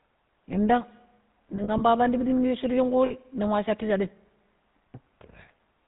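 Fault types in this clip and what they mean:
GSM full-rate codec: Present for the whole clip, this codec models the vocal tract as a filter and excites it with a sparse, regularly spaced pulse train, discarding two of every three excitation samples. Nothing above 4 kHz survives, so sibilants lose their edge, and the coarse excitation gives the speech a plainly audible buzzy, gravelly roughness. The overall character fits a 13 kbit/s GSM full-rate stream.
Lost GSM frames: Between 1.56 and 1.82 s, just before "ya pandi shi minu", damaged frames were replaced by repeating the last good frame's settings. Here about 80 ms of sound is affected, spread over roughly a quarter second in short runs of a few tens of milliseconds each, producing brief rough, metallic rings. Shorter 40 ms patches of the same ring occur at 3.06 to 3.12 s, before "ning wa shatu shaɗim", and at 4.90 to 4.95 s.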